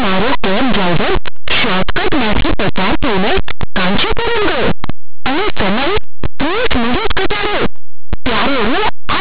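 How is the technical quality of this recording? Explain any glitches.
The technical quality is poor. A single fault runs through the whole recording.

Linear audio read as companded, from start to finish: the speech was stored as plain linear 8-bit samples, but playback treats each byte as a mu-law code and expands it. Because mu-law packs its loudest values next to codes that in linear terms sit just beside zero, quiet passages and the small swings around silence jump to the largest values on one side, while the other side stays small. The result is harsh, buzzing distortion that is very loud, heavily one-sided, with even pauses roaring. Simple clipping would only flatten the loud peaks, and ordinary 8-bit rounding would add faint grain about 50 dB down. This fault instead blasts the quietest moments. The underlying 8-bit samples are never read as linear values at all.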